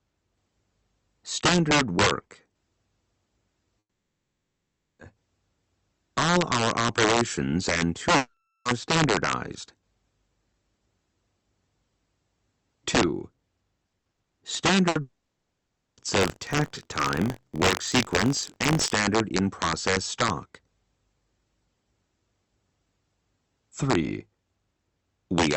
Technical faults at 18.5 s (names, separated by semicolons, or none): integer overflow; buffer tearing